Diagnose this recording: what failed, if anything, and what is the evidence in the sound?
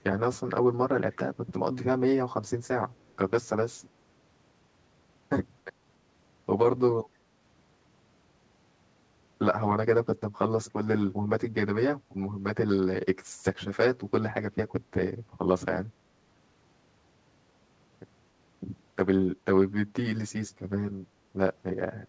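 Channel delay (comb filtering) runs through the whole clip. The speech sounds hollow and phasey from start to end. One channel lags the other by around 10 ms before the mono sum. Shared content cancels at evenly spaced notches, the first near 50 Hz. This points to the driver or buffer stage.

Two faint repeats of the speech appear, from 1.12 to 1.17 s and from 2.9 to 3.13 s. Each trails the original by 291 ms, at about 35 and about 40 dB down. The likely cause is echo leak in call processing. A loudspeaker fed a microphone, and the echo canceller let some residue back.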